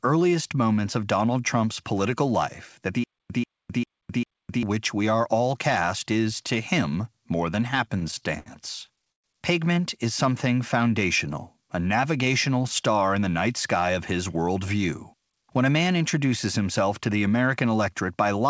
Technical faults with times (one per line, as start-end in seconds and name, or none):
3.04-4.63 stutter with silent gaps
7.88-8.48 repeated stalls (stutter)
8.86-9.26 repeated stalls (stutter)